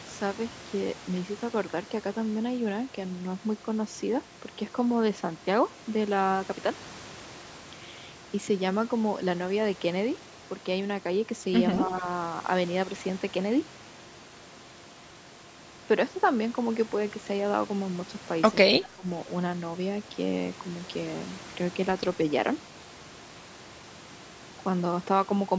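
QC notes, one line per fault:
11.87–12.04 s and 18.71–19.07 s, speech suppressed in double talk: the speech briefly ducks, gently at first (a few decibels), then deeply (about 20 dB) for around 0.4 s. This is likely an echo canceller turning down the near talker while the far side spoke. The speech stays within the call band that stops at 8 kHz.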